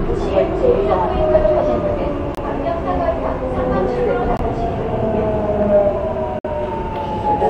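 At 2.35 to 2.38 s, 4.37 to 4.39 s and 6.39 to 6.45 s, gaps between stream segments cut the sound with hard-edged silences of roughly 28, 22 and 57 ms. These fall every 2 s, where segment timestamps fail to meet. They appear as flat waveform dropouts and blank vertical spectrogram stripes.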